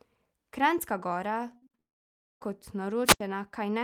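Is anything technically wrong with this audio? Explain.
Yes, the speech is interrupted by three faults in close succession.

From 1.57 to 1.79 s there is repeated packet loss, giving a robotic sound. Six short gaps, the longest 42 ms, are each patched by stretching the preceding sound, so about two-thirds of this span is filler. The result is choppy, with pieces missing. On a spectrogram it shows as repeated frozen, smeared harmonic blocks.

From 1.79 to 2.42 s the audio drops out almost entirely for about 0.6 s. It is mostly silence after a brief fading tail of continued sound. The speech resumes with that portion missing. The waveform goes nearly flat. This is likely a long network dropout in which nothing arrived for the receiver to play.

From 3.05 to 3.20 s there is a wireless microphone squelch dropout. The radio signal weakens, hiss swells briefly, and then the receiver mutes for about 82 ms before the speech returns. 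The spectrogram shows a short broadband noise haze, a clean blank gap, and the speech harmonics resuming.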